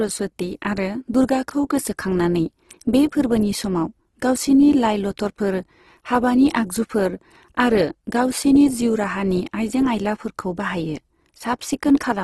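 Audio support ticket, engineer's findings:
Speech, full length: grainy, rough texture on voiced sounds, noisy fill in the upper bands, nothing above about 12 kHz. Likely Opus compression in its CELT music mode, at a rate consistent with about 16 kbps. Band energies are kept, but with too few bits the fine detail is replaced by folded or noise-filled content, so tones go coarse. Super-wideband ceiling explains the 12 kHz cut-off.

1.15 s: small forward jump, just before "दुर्गाखौ गोसोखांनानै बे". Likely a dropped buffer (overrun) in capture. Hardware overwrote unread samples, and a few milliseconds are gone. The two sides are joined with no silence, hence the discontinuity.

5.27 s: same symptom right after "समाव गावसिनि लाइ". Likely dropped buffer (overrun), a few milliseconds lost, same splice mechanism.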